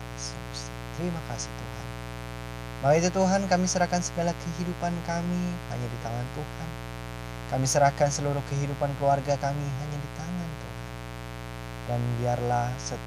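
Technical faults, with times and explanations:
Throughout, mains buzz: a steady, raspy buzz sits under the speech at roughly 10 dB below it, loud enough to hear in every pause. Sharp switching spikes from a dimmer, rectifier or unshielded run enter twice per 60 Hz cycle, so the interference repeats 120 times a second and carries a dense stack of 60 Hz harmonics. A spectrogram shows evenly spaced horizontal lines climbing into the kilohertz range, and the waveform shows regular spikes between syllables.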